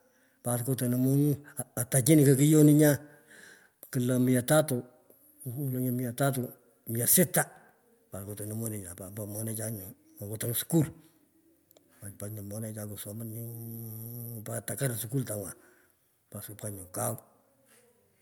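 No technical faults can be heard anywhere in this speech recording, and the signal holds steady throughout.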